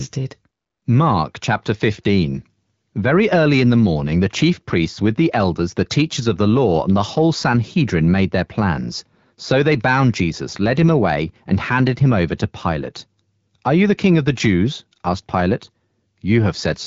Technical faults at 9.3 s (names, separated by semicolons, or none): none